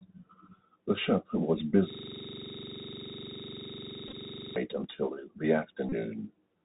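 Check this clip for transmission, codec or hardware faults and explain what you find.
Three kinds of fault are audible: a narrowband Bluetooth CVSD headset codec across the whole clip, a system hang loop, and two bursts of Bluetooth headset packet repetition.

The Bluetooth CVSD headset codec runs throughout, with plainly audible damage. The link encodes the speech at 64 kbit/s as a single up-or-down bit per sample, with a step size that adapts. Nothing above 4 kHz survives, so the speech sounds muffled and narrow. A granular hiss sits under it, s sounds come out scratchy, and loud high-frequency moments distort because the step size cannot keep up.

From 1.90 to 4.56 s a system hang loop takes over. The computer or its audio driver stalled while the sound hardware kept replaying the same ring buffer. One 42.67 ms piece of audio repeats exactly, about 60 times, which fits a 2048-sample buffer. 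At a loop rate of 23.4 Hz the result is a rapid, machine-gun-like stutter rather than a smooth tone, and the speech freezes on that single fragment for over two and a half seconds.

Bluetooth headset packet repetition occurs twice. Voice packets between headset and phone were lost, and the chip decoded the previous packet's bits again in their place. At 4.08 to 4.14 s, inside the stutter, the losses are scattered over 45 ms, with the longest unbroken run around 10 ms, adding short rough patches. At 5.89 to 5.93 s a solid 30 ms run of repeats produces a brief buzz near 267 Hz before good packets return.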